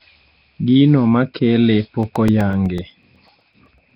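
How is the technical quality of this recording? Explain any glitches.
The recording has two problems: a heavy codec coloration over the whole clip, and a run of regular ticks in its second half.

Throughout, the speech sounds rough and hissy, with a smeared, underwater quality and nothing above about 5.3 kHz. This is likely Nellymoser compression at around 22 kbps. Quiet bands get no bits and are filled with noise, so the hiss follows the speech rather than sitting steadily underneath it as tape or mic noise would.

From 2.03 s to 3.91 s there are periodic USB or driver dropouts. Every 0.125 s, a couple of milliseconds of audio is replaced by silence, around fifteen times in all. Their strict evenness separates them from random network packet loss.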